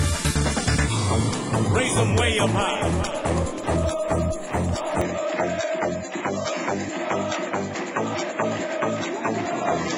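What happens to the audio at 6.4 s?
An input switched to a poorer device runs from 5.01 s to the end, likely a change of microphone. The new path cuts everything above 7.6 kHz, so the sound turns duller. A fresh noise floor sits roughly 35 dB down, with no gap and no level jump.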